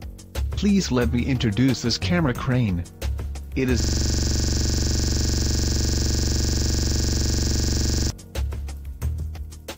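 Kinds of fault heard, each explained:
System hang loop: from 3.80 s to 8.10 s the output stops advancing and a single 42.67 ms fragment of audio repeats exactly, about a hundred times, producing a rapid mechanical repetition at 23.4 Hz. The computer or its audio driver stalled while the sound hardware kept replaying the same ring buffer. The loop length fits a 2048-sample buffer, and normal audio resumes at 8.10 s.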